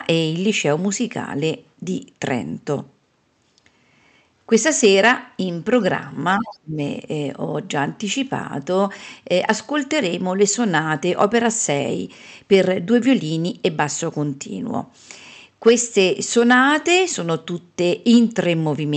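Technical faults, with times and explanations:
6.38–6.79 s, speech suppressed in double talk: the speech sinks by around 25 dB for roughly 0.4 s and then recovers, and this is likely the echo canceller turning down its own talker while the far side was also speaking. It differs from a network dropout because the level dips instead of falling to silence or glitching. It also differs from a codec fault because it lasts only as long as the overlap, while the 8 kHz band limit of the Opus call path stays steady throughout.
6.47–6.54 s, other side's voice leaking through: inside that dip, a brief scrap of a second voice surfaces for about 70 ms, sitting around 20 dB below the speech. The likely cause is residual loudspeaker echo that the canceller did not fully remove from the microphone. It stands apart from background noise or crosstalk because it is voice-like and falls within the double-talk moment.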